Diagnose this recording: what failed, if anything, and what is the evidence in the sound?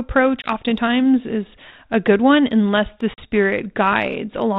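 Packet loss on an ADPCM call, at the network stage. Hard silent gaps of 20 ms at 0.42 s and 40 ms after "good one unless the" at 3.14 s. The decoder's predictor then briefly loses step.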